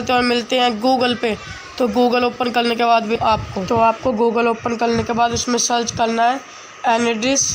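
At 3.15 s a skip ahead occurs: roughly 0.7 s of audio is dropped while later audio is already queued, so playback jumps forward and the two sides are joined almost directly, with no silence, by 3.28 s.

From 3.74 to 4.28 s a jitter buffer speed-up follows. The receiver trims repeated short pitch-period segments, around 70 ms in total, to shrink excess buffered delay. The sound runs about 10% fast at unchanged pitch and feels hurried.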